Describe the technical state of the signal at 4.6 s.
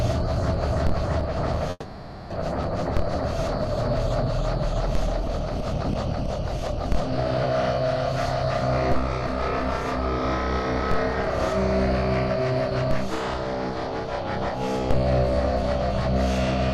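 Jitter buffer speed-up runs from 4.36 to 5.30 s. The receiver's buffer had built up more audio than its target, so it trimmed short pitch-period-length pieces repeatedly, around 40 ms in total. The sound plays about 3% faster at unchanged pitch.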